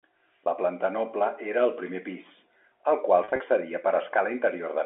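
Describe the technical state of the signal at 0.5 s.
Packet loss with pitch repetition sits just before that point, from 0.44 to 0.46 s. About 20 ms went missing, which fits a single lost packet. The receiver bridged it by repeating the last pitch period, so it sounds like a brief, slightly buzzy held tone rather than the silent gap or click of a plain dropout.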